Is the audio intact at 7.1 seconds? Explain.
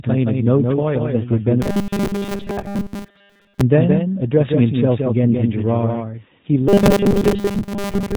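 No. At 7.1 seconds three faults overlap.

The first is robotic sound from repeated short buffers, running from 6.69 s to the end of the clip. Audio is likely arriving too seldom, so the playback side fills gaps by looping the last fragment it received. Most of the real sound in this stretch is skipped. The speech becomes a rigid, metallic buzz at 200 Hz that only loosely tracks the syllables. That pitch fits a fragment about 5 ms long being repeated. Ordinary dropouts would leave silence or clicks. Here, instead, a steady tone is imposed on the speech.

The second is a doubled audio track, present throughout. A second, full-band copy of the speech trails about 150 ms behind, roughly 5 dB quieter. It is likely the result of the signal being captured twice along paths of different speed. Room echo would have a decay and a room colour, but this copy is dry and separate. It gives a distinct slapback rather than reverberant smear.

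The third is G.729 codec damage, also present throughout. The codec models speech with a vocal tract filter, a pitch predictor and a few pulses per short frame. Nothing above 4 kHz survives, which fits an 8 kbit/s G.729 stream. The result is plainly audible roughness and a synthetic edge. Its band limit is narrower than a wideband codec's, and its texture is grainy and vocoded rather than the swirly artefacts of a transform codec.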